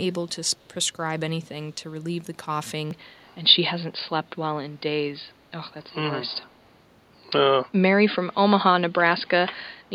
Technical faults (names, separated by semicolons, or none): input switched to a poorer device; echo leak